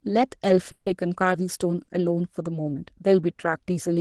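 Speech carried over a call path whose Opus coding leaves its usual coding noise and a top end that stops around 12 kHz, consistent with a low-bitrate setting near 20 kbps. From 0.71 to 0.89 s the sound hangs on a fading buzz for about 150 ms and then drops to roughly 20 ms of silence before resuming exactly where it stopped. This is a call audio freeze. It was likely caused by packets held up in transit, which let the jitter buffer run dry, so the receiver kept extending the last sound until delivery restarted. Nothing is lost, but the rest of the audio now runs about 150 ms later. From 1.83 to 1.99 s a sound is held too long for about 50 ms before the speech carries on. This is a short stall from a late packet. One packet missed its playout time, the buffer emptied, and the receiver stretched the preceding sound until that packet turned up. No audio is missing, but the timing is pushed back by another 50 ms.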